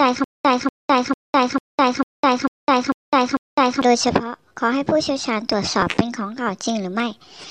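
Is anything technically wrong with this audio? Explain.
Yes, two things stand out.

From the very start until about 3.82 s there's a stutter with silent gaps, and it's already going when the clip begins. A burst of roughly 241 ms repeats eight times, each followed by about 206 ms of dead digital silence, so it cycles every 447 ms or so. That's most likely a stalled player or stream replaying its last fragment on each retry and then running dry. Whatever should have played there is simply gone.

Then around 5.81 to 5.83 s there's a tiny blip from lost LE Audio frames. About 15 ms of audio went missing, which fits two dropped LC3 frames over a Bluetooth LE link. The decoder papers over the hole by reusing the last spectrum with scrambled signs, so you get a brief noisy smear in place of the real content. It's short enough that it never has time to fade toward silence.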